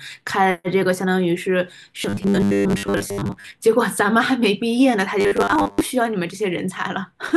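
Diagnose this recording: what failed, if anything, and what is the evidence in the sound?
Robotic sound from repeated short buffers at 2.02–3.53 s and 5.21–5.83 s: spectrogram shows 100 Hz harmonic stripes, likely a driver buffer looping blocks that fit 10 ms.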